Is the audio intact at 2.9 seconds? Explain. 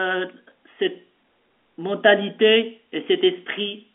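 Yes, at 2.9 seconds the speech runs intact, with nothing wrong at that point beyond the narrow telephone band of the G.711 line it travels over.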